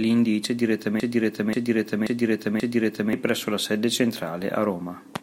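At about 1.00 s the speech catches in a broken-record loop: a fragment of roughly 0.53 s repeats exactly, back to back, four times, until about 3.13 s, when it picks up again at "presso la sede". The stutter is perfectly identical each pass, which is the giveaway. Most likely the player or stream stalled and kept re-sending the last chunk it had buffered, so whatever should have played in those two seconds is simply gone.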